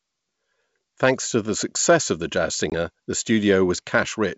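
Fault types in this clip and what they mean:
Packet loss on an ADPCM call: Just after "success of the jazz", at about 2.70 to 2.74 s, around 20 ms of audio, a couple of packets' worth, drops to hard-edged silence. Unlike a plain dropout, the speech that follows comes back slightly distorted. The decoder's adaptive predictor and step size have lost track of the sender's and take some tens of milliseconds to settle against the clean G.722 wideband sound.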